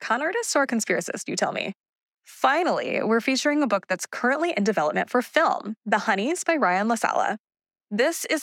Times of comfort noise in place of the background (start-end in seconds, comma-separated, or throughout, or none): none